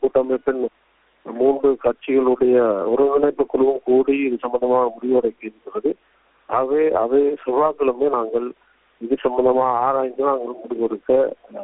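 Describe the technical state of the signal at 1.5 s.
At 1.5 s the signal is intact, with no dropout, click or distortion, only the steady narrowband character of the call path, whose G.711 A-law coding leaves nothing above 4 kHz.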